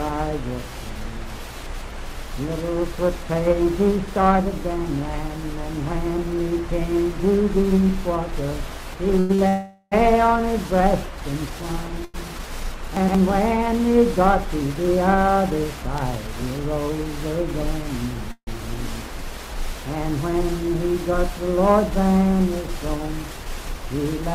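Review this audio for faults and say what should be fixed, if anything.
Short stall from a late packet: at 9.19 to 9.31 s, 9.35 to 9.40 s and 12.05 to 12.16 s, packets missed their playout time and the jitter buffer ran dry. The receiver held the last sound for 98, 31 and 92 ms, then resumed at the same point. Each is heard as a smeared, slightly buzzy hold, with nothing lost. A slightly deeper jitter buffer target, or faster adaptation when late arrivals cluster, would absorb these gaps.

Call audio freeze: from 9.48 to 9.94 s, and again from 18.32 to 18.49 s, playback stopped, likely because packets were held up in the network and the buffer emptied. The first freeze stretches the last sound into a fading buzz for 434 ms. The second lasts 156 ms and decays into about 70 ms of silence before the audio picks up where it stopped. Improving the network path, for example with QoS marking or less congested routing, would prevent these holdups.

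Chunks out of order: at 12.97 to 13.15 s, a 60 ms chunk of audio was delivered two chunks late and played after the audio that should follow it. The result is a brief jumbled stretch with three abrupt joins, although no audio is missing. Reordering packets by sequence number or timestamp before playout would fix this.

Jitter buffer speed-up: from 15.27 to 17.39 s, the buffer held more audio than its target, so the receiver cut short pitch-period pieces repeatedly. This removes about 70 ms and runs the audio at 103% speed with unchanged pitch. From 22.39 to 24.28 s it does the same at 102%, removing about 50 ms. Draining excess buffer more gradually, spread over a longer span, would make the catch-up inaudible.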